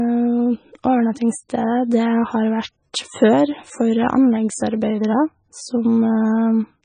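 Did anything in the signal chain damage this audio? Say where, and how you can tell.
Yes. The damage sits at the codec stage and runs through the whole speech clip. Nothing is present above about 9.4 kHz, a hard treble ceiling, and the heavy smearing and watery texture point to likely MP3 compression at a very low bitrate, on the order of 17 kbps. Short of bits, the encoder cuts the top band at a fixed frequency and discards weaker spectral lines, which flicker between frames and blur consonant attacks.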